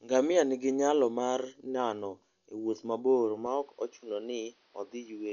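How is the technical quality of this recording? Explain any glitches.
The recording is heavily degraded throughout, and the sound gets worse again near the end.

From start to finish the speech sounds dull and muffled, with nothing above 7.1 kHz, and a rough, fluttering noise clings around voiced sounds. This is likely Dolby Digital compression at a low bitrate, which fits something around 48 kbps. To save bits, the encoder cut the band and left many frequency lines without mantissa detail. The decoder then filled those gaps with dither noise, which gives the grainy flutter.

From 3.46 s to the end, the sound turns duller and boxier. The top of the band drops to about 6.1 kHz, and a faint new background noise appears, roughly 40 dB below the speech. There is no gap at the change and no noticeable jump in level. The cause is likely that the input was switched to a poorer device partway through the recording. 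That device passes a narrower band and brings its own coloration and noise floor.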